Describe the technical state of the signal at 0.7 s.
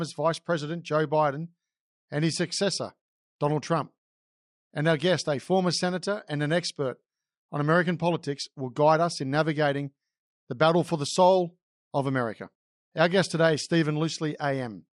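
At 0.7 s the speech sounds dull, with a plainly audible gurgling, granular distortion that runs through the whole clip. This is likely MP2 compression: too few bits switch whole upper sub-bands off and coarsely quantise the rest, which fits a rate near 80 kbps.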